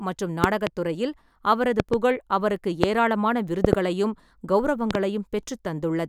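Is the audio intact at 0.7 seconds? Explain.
No. A loud pop, actually two sharp pops, runs from 0.44 to 0.69 s, ending just before "துறையில் அவரது". It is likely a voltage pulse from a plug or switch. It peaks about 20 dB above the speech and appears as tall waveform spikes and full-height vertical spectrogram stripes.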